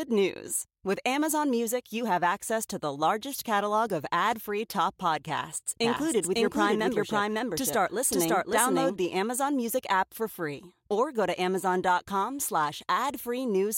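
Right after "ad free top podcasts", from 5.84 to 8.96 s, there's a doubled audio track: a second copy of the speech trails about half a second behind at roughly equal level, dry and full-band, cutting in and out abruptly. Likely a slower capture path or misaligned edit.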